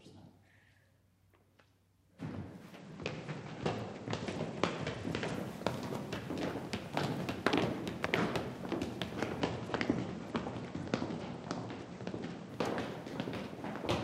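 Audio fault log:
2.78–5.34 s and 9.40–12.49 s, Bluetooth SBC bit pool drop: treble dulls and gritty noise rises, which fits the bit pool falling from 31 to 12 (about 88 kbps) and starving the upper sub-bands.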